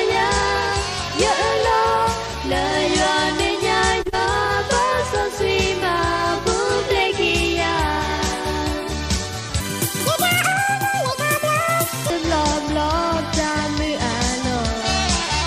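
From 9.60 to 12.10 s the sound suddenly jumps high and hurried, running at about 1.77 times its proper rate and sitting nearly ten semitones above where it should be, before snapping back at normal speed. This is a section at the wrong speed: speed and pitch rise together as one, which points to the passage likely having been played back or resampled against the wrong clock rather than pitch-shifted on its own.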